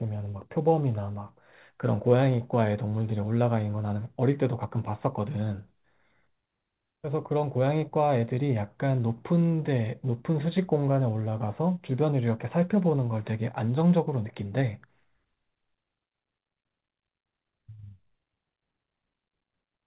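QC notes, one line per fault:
No faults found in this speech clip.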